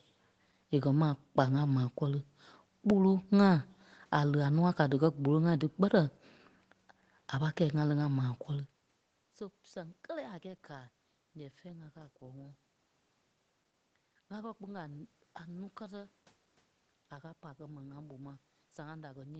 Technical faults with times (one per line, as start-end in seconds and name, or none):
none